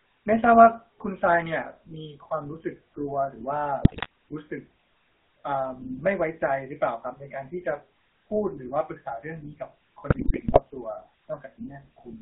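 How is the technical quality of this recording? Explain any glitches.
Quality is poor: the whole recording carries plainly audible telephone-codec coloration, and two short stretches break up badly.

GSM full-rate codec, throughout: the speech is rebuilt from a vocal-tract model excited by sparse, regularly spaced pulses, with the line limited to about 250 Hz to 3.7 kHz. That gives a plainly audible buzzy, gravelly roughness and a thin, band-limited tone, consistent with 13 kbps GSM.

GSM bit errors, 3.82 to 4.06 s and 10.10 to 10.62 s: corrupted bits reach the decoder, so filter, pitch and gain values come out wrong frame after frame while each burst lasts. The spectrum bends and the level jumps, and the speech breaks into squawks, pops and gargling, longest in the second burst.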